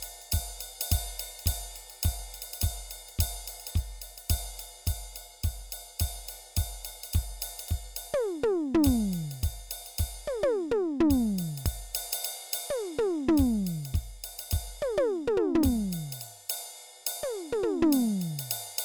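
A music recording with a recurring skip: short pieces of audio drop out at 3.71, 7.68, 11.66 and 15.63 s, roughly every 4 s. Each gap is only around 30 ms, and the music on either side is butted straight together with no silence, so you hear a jump rather than a pause. That steady spacing points to audio missing between chunks, likely from a recorder or processor losing a sliver each time it closes one 4-second block and starts the next.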